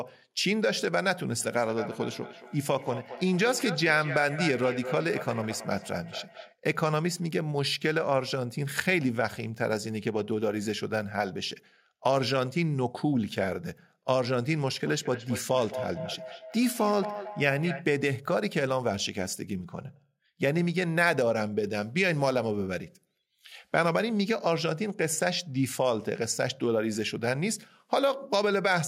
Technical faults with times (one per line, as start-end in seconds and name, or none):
1.40-6.58 feedback echo between two devices
14.87-17.92 feedback echo between two devices